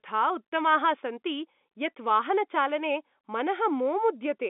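Nothing stood out on listening to this speech, which comes through a narrow telephone-band line with nothing above about 3.8 kHz.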